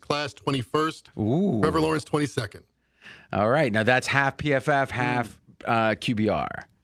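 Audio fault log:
No faults heard anywhere in the clip.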